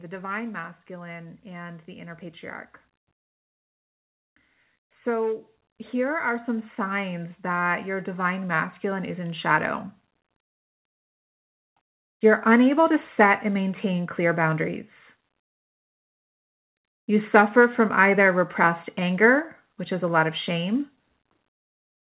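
From 0.87 to 14.92 s, speech and background swell together by about 15 dB: automatic gain rising, the gain control lifting an input it judged too quiet.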